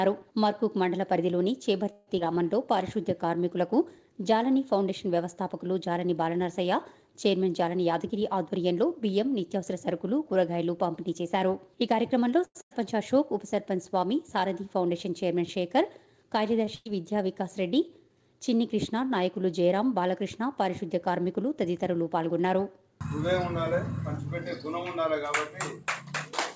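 At 1.92 to 2.09 s there is a call audio freeze, most likely packets held up in transit until the jitter buffer emptied. The receiver extends the last sound for about 150 ms as a fading buzz or hiss. Playback then resumes exactly where it stopped, so nothing is lost, but everything after it now runs 152 ms later.

Right after, at 2.19 to 2.22 s, the audio skips ahead. Roughly 70 ms was discarded while later audio was already queued. Only about 12 ms is patched over, so the two sides of the jump join almost directly.

From 2.25 to 3.37 s comes a jitter buffer slow-down. The buffer, still short of its target, repeats single pitch periods and bits of pauses to add 67 ms. The audio plays at 95% speed with unchanged pitch, and sounds come out drawn out.

At 7.48 to 9.74 s the opposite happens in a jitter buffer speed-up. With more audio queued than the target, the receiver trims short pitch-period pieces, around 150 ms in total. 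Playback runs at 106% at the same pitch and has a hurried feel.

A second call audio freeze spans 12.45 to 12.57 s, again likely a stall in packet delivery. About 100 ms is filled with extended sound, and the last 40 ms of that decays to silence before playback resumes from the same point.

Immediately after, at 12.61 to 12.73 s, a burst of packet loss removes 100 ms outright. The receiver carries the preceding sound forward as a fading buzz or hiss, then jumps to later audio with that stretch missing. A second burst at 16.75 to 16.87 s behaves the same way: 100 ms is missing and about 100 ms is concealed, with no drop to silence.

Just before it, at 16.65 to 16.69 s, a short stall from a late packet stretches the last sound by about 24 ms until the packet arrives. Nothing is missing, only a brief hold with a slight buzz or dip. Across the whole clip the call path passes nothing above 8 kHz, consistent with G.722 at 64 kbps.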